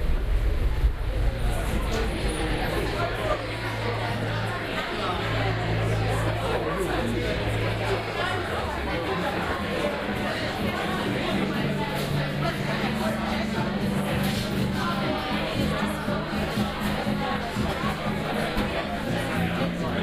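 On listening to this recording of sounds, nothing technical stood out.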